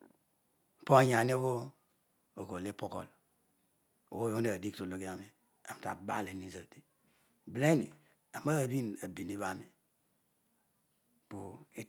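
Two devices in the chain are likely running on separate clocks that disagree by around 200 ppm, so the buffer between them drifts until it has to drop or repeat a small block of around seven samples. These clock drift buffer slips recur every 0.757 s from 0.31 s to 11.67 s, about fifteen in all, and each is heard as a brief click or tick in the speech at a steady, metronome-like rate.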